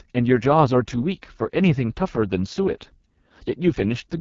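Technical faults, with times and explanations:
Throughout, AMR wideband (HD Voice) codec: the speech sounds rough and raspy, which fits the lowest 6.6 kbit/s mode, and there's nothing above 7.5 kHz.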